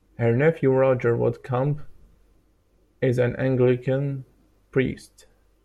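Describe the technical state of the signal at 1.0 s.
At 1.0 s the signal is intact, with no dropout, clipping, distortion or other technical fault audible at that moment.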